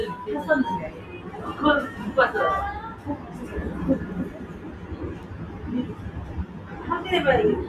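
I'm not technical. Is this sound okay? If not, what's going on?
No. The level keeps swelling and sinking throughout, so steady parts and fading tails seem to thin out while sudden hits still come through. This is a noise suppressor applied to music or sounds: a filter built for speech is treating ordinary sound as unwanted noise.

At 0.92 to 1.3 s, 2.95 to 3.28 s, 4.32 to 4.96 s and 6.47 to 6.72 s, the sound audibly dips. This is sound cut by the noise suppressor, which mistook these moments for noise and turned them down.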